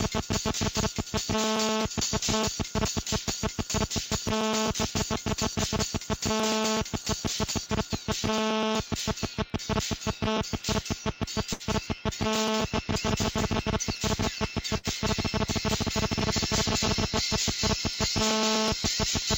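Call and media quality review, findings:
Periodic USB or driver dropouts, 0.08 s to end of clip: short ticks every 0.124 s, about 8 per second, heard only under signal. Audio skipped, not silenced, as the driver or USB bus stalls on a fixed schedule. The strict clock-like spacing and tiny gaps separate this from network loss.

Burst of packet loss at 11.53 to 11.63 s and 14.78 to 14.87 s: each begins with about 60 ms of concealment, the last sound held and fading, then resumes roughly 60 ms later with that stretch missing. Network path, packets lost or arriving too late. Isolated, irregular and far longer than the driver ticks.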